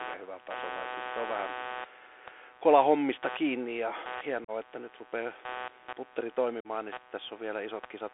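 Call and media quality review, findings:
Computer activity noise, throughout. Buzzing pulse train at about 150 per second, roughly 15 dB below the speech, riding under the whole clip. Rises and falls with the computer's processing load, not with the talker. Probable component: PC audio interface sharing ground with CPU/GPU supply. Load current modulates the ground reference and leaks into the analogue input.

Bluetooth CVSD headset codec, throughout. Narrowband telephone sound, 300 Hz to 3.5 kHz, nothing above. Granular hiss under speech, scratchy s sounds, loud bright passages distorted. Probable component: headset link in 64 kbps CVSD mode. One-bit delta modulation with adaptive step. The step cannot track fast, loud high-frequency swings, causing slope-overload distortion plus constant granular noise.

Unconcealed Bluetooth headset packet loss, 4.44–4.50 s. About 37.5 ms hole after "kola hommista kiinni ja", before "että nyt rupeaa". 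Hard-edged gap, brief quieter recovery. Consistent with a run of roughly ten short packets dropped and replaced by silence or an idle pattern.
Same fault, 6.60–6.67 s. 45 ms hole before "niin sitten". Abrupt gap and dip. Probable component: headset radio link, no concealment.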